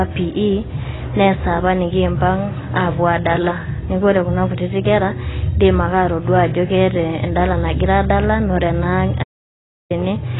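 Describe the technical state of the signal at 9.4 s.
At 9.4 s the signal is in an audio dropout to silence running from 9.24 to 9.90 s, about 0.67 s of silence with no room tone. The input was likely lost while recording continued, so the speech cuts off abruptly and resumes mid-flow. The surrounding speech also shows heavy AAC compression. Nothing is present above 3.9 kHz, leaving it dull and smeared with a warbling, fizzy texture on sustained sounds and sibilants. This is the likely result of AAC-LC at a very low bitrate, consistent with about 16 kbps.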